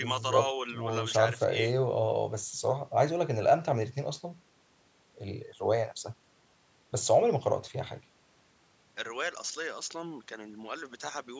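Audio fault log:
No fault is logged for this speech clip, which was captured through call microphone processing that rolls off the lowest bass and carries nothing above 8 kHz.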